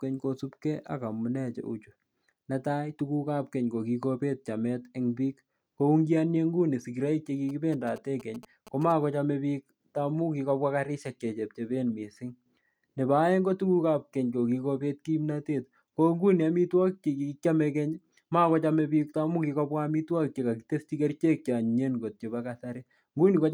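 A nearby 2G phone exchanging signalling bursts was rectified by the audio circuitry in this speech clip, producing GSM signalling bursts from 7.49 to 8.92 s, just after "nguni sigiroik che": galloping ticks and short 217 Hz buzzes roughly 20 dB below the speech.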